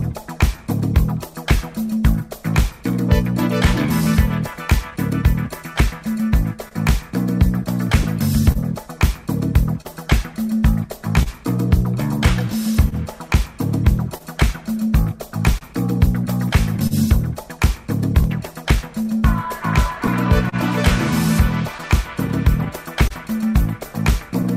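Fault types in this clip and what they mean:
Clock drift between sender and receiver: The sending device's clock runs slow, by about 2 percent, compared with the receiver's. The receiver's buffer therefore keeps draining. It has to stretch or patch the audio to avoid running dry. Small timing hiccups appear at uneven intervals across the whole clip. The tempo never quite settles. The effect is a slightly unsteady pace rather than any single obvious break.
Repeated timing corrections: From 0.21 to 6.22 s the receiver repeatedly repeats short pieces to keep up with the slow sender. Playback runs at 99 percent speed over this stretch. Around 70 ms of extra audio is added in total. The edits all lengthen the sound and are unevenly spaced. Each one is tiny. They come across as faint stutters and a gently dragging rhythm.
Scattered short gaps: From 4.04 to 24.46 s, about twenty short holes open where audio arrived late or not at all. 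The receiver fills each one by carrying the last sound forward. Roughly 400 ms is patched in all, about 2 percent of that stretch. The longest fill lasts around 40 ms. The sound stays mostly clear, with brief ticks, smears and small hiccups dotted through it.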